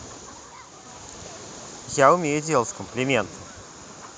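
A short recording of speech, with no technical fault audible anywhere in it. Nothing in the audio calls for a time or a cause.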